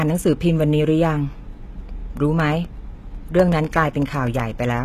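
From the start the speech has a gritty, metallic, lispy edge on its s sounds, and the treble does not sit naturally with the lower voice. Nothing is present above about 14.9 kHz. This is likely HE-AAC compression at a very low bitrate, around 20 kbps. The codec transmits only the lower spectrum and fakes the top by copying lower bands upward, so the rebuilt harmonics clash across the join.

From 2.40 s to 4.77 s a steady ticking runs under the speech, about twenty small clicks spaced exactly 0.125 s apart, eight per second. These are periodic USB or driver dropouts. At a fixed interval something stalls the audio path, and roughly a millisecond of signal is replaced by silence each time. Those brief gaps cut the waveform abruptly, and each cut is heard as a tick.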